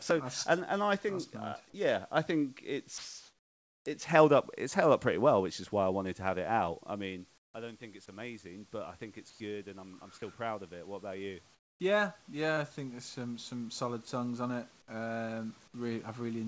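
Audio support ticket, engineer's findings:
Automatic gain rising, 6.21–10.09 s (after "why I wanted to", until "still proud of it") and 10.85 s to end: AGC reacting to input dropping about 16 dB as talker moved back near 7 s. Gain climbs about 6 dB in the first span, voice and background swelling together.

Comfort noise in place of the background, likely DTX: encoder's voice detector gated pauses. Real room noise, about 35 dB under speech peaks, replaced by smoother synthetic noise at 7.38 s (160 ms, about 23 dB quieter), 9.30 s (100 ms, about 2 dB louder), 11.54 s (260 ms, about 16 dB quieter). G.722 path band-limited to 8 kHz.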